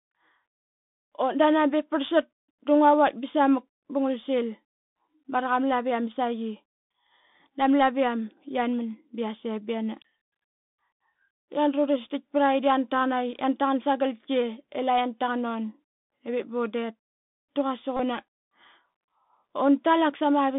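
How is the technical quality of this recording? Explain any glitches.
The technical quality is poor. The whole recording has narrowband Bluetooth headset sound, and there is one short buzzing glitch near the end.

The Bluetooth CVSD headset codec runs throughout. The speech sits in a telephone-like band of about 150 Hz to 3.6 kHz, which fits a 64 kbps CVSD link. This one-bit-per-sample coder chases the waveform with an adaptive step. The damage is plainly audible: s sounds turn scratchy, loud bright sounds distort, and a grainy hiss lies underneath.

A Bluetooth headset packet repeated from 17.97 to 17.99 s, just after "da quasik". About 26 ms of audio was lost, which points to roughly seven packets. The chip decoded the last good packet again each time. Repeating every 3.75 ms, this produces a brief buzz near 267 Hz.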